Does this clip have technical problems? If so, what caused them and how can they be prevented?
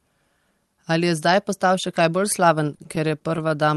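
Yes. Between 2.63 and 3.52 s the speech shows repeated stalls (stutter): eight brief holds, the longest 28 ms, about 102 ms in total. Packets arrived late, so the jitter buffer kept running dry and the receiver stretched the last sound until data resumed; nothing is lost, but delivery drags. A larger or more adaptive jitter buffer, plus a steadier, less congested network path, would prevent it.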